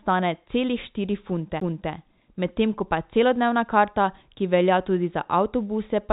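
Speech heard through a telephone-band G.711 A-law path, with nothing above 4 kHz, carries a CD skip at 1.60 s, between "celih štiri" and "medtem ko pa celodnevna". A brief mute of about 10 ms comes as the laser jumps to another turn of the disc's spiral. Unlike a simple dropout, the sound does not pick up where it stopped: it resumes from a different point, displaced by whole disc revolutions.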